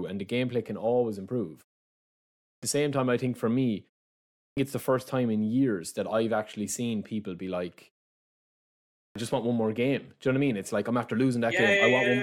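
At 2.4, 4.32 and 8.91 s, clipped start after a pause: the output wakes late from silence, cutting 226 to 249 ms of onset, as at "it's the first time".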